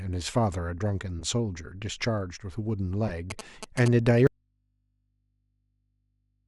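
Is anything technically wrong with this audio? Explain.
Yes, there are three distinct problems.

Corrupt frames got decoded twice. At 1.19 to 1.23 s roughly one damaged frame slipped through, and at 3.08 to 3.12 s a short run of a few did. The decoder played flipped bits as real data, throwing energy to the wrong frequencies, so you hear brief chirpy blips peaking at about -25 and -20 dBFS.

From 3.30 to 3.88 s there are GSM signalling bursts: a nearby 2G phone chattering with the network, its radio pulses rectified by the audio circuit. That gives the galloping dit-dit-dit of short 217 Hz buzzes, sitting about 10 dB under the speech.

Then at 4.27 s the speech drops out to a faint residue and never comes back. The cut is abrupt, and what's left until the end is just mains hum about 45 dB down. The likely cause is the input going open while the downstream chain stayed live.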